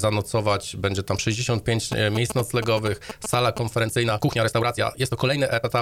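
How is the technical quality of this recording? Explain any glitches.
The recording has two clear technical faults.

From 1.92 to 3.59 s there are GSM signalling bursts. A nearby 2G phone is exchanging short control bursts with the network. The audio circuitry rectifies that radio energy into sound. It comes through as a galloping dit-dit-dit of short buzzes at about 217 Hz. The interference is loud, only a little below the wanted sound.

From 3.73 s to the end at 5.82 s there is a time-stretched section. The pace suddenly jumps to about 1.58 times normal speed, yet the pitch stays the same. This likely comes from software squeezing the audio to fit a set length by dropping short pieces. That makes the passage sound rushed.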